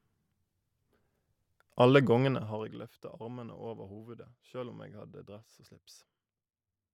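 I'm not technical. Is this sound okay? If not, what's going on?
Yes, the recording is in sound technical shape, with nothing in the signal that points to a problem.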